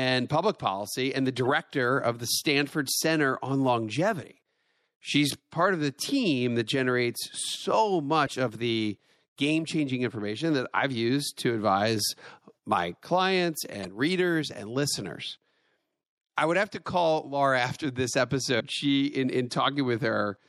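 MP3 compression runs through the whole speech clip: weak spectral detail flickers between frames, giving a watery, swirly edge to sibilants and softened onsets. The damage is plainly audible, likely from a low-bitrate encode, around 64 kbps.

Damaged data in a compressed stream appears at 1.43–1.47 s, 4.20–4.24 s, 8.24–8.29 s, 13.81–13.85 s and 18.59–18.61 s. At each point the decoder misreads corrupted frames and loses sync, producing a brief glitch before decoding resumes.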